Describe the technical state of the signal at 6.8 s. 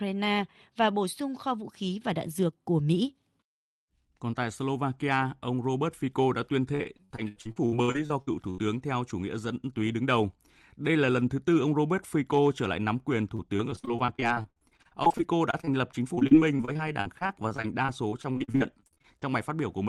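At 6.8 s the speech sits inside repeated packet loss, lasting from 6.75 to 8.60 s. Over a dozen gaps, the longest 76 ms, are patched by extending the preceding sound, so about a third of the span is concealed and comes out choppy and robotic.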